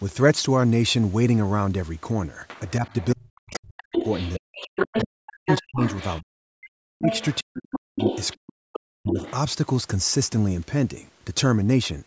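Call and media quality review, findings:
Echo canceller likely leaving residual loudspeaker signal in the mic path: other side's voice leaking through, 2.48 to 6.21 s and 7.11 to 9.33 s, only slightly quieter than the talker, a second voice sitting almost level with the main one.

Echo canceller failing to separate near-end talker from echo during double talk, likely ducking both: speech suppressed in double talk, 2.8 to 9.18 s, about 4 s affected in total, talker dipping or dropping out in pieces, deepest cuts around 40 dB.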